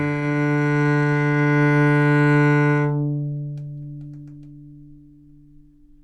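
A recording of sounds with no technical faults to report.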